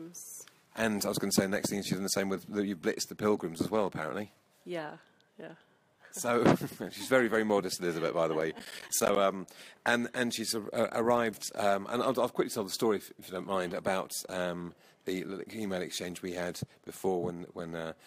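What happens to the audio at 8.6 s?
At 8.6 s the audio is in the middle of a burst of processor overload crackle running from 8.41 to 9.16 s. The processor is missing its deadlines for short audio buffers, and each miss drops a brief slice of sound to silence with hard edges. The gaps sound like blocks of around 10 ms, roughly fifteen of them, which fits a small buffer size. Together they produce a gritty, tearing crackle over the sound that stops at 9.16 s.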